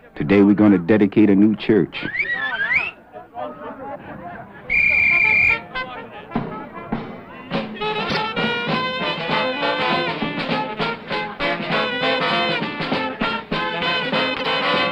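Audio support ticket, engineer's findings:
Brief garbled flutter, 8.09–8.17 s and 14.34–14.46 s. Frames out of order in the decoder input: adjacent frame runs swapped (single ~26 ms blocks, then paired 52 ms blocks), so each stretch plays halves exchanged. No time lost.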